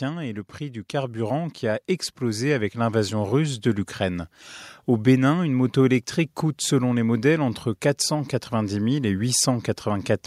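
From 0.58 s, just after "et le", the speech and the room noise behind it swell together, climbing steadily until about 4.37 s and ending roughly 10 dB louder. This is automatic gain rising: the automatic gain control judged the incoming level too low and kept raising its gain over nearly four seconds. Because it amplifies everything equally, the background lifts in step with the voice rather than the talker simply getting louder.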